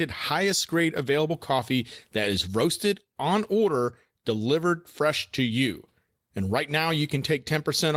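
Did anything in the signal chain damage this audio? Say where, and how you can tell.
Yes, and it happens at the receiving end of a network link. It's clock drift between sender and receiver: the far end's audio clock is running a few percent fast, around 4 percent, relative to ours. Its samples arrive quicker than we consume them, so the jitter buffer keeps filling. You can't hear the drift directly, but it explains the small stumbles all through the speech.

The audible side is repeated timing corrections, running from about 0.02 s right through to 7.89 s. To keep the jitter buffer from overflowing, the receiver keeps trimming short chunks out, which leaves the speech moving at about 105 percent of natural pace. The cuts all go the same way but land at uneven intervals, so you get faint hiccups and a slightly rushed, lurching tempo rather than one obvious glitch.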